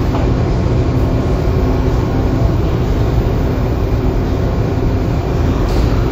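No technical faults are audible.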